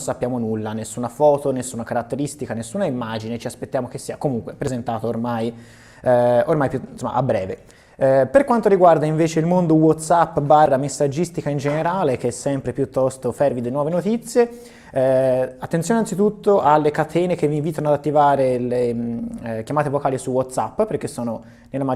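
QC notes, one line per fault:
4.67 s, 10.66 s, 16.65 s: overlap between stream segments. At each 6-second segment boundary, overlapping timestamps make the player discard 5 to 17 milliseconds, so the waveform jumps with a tiny skip.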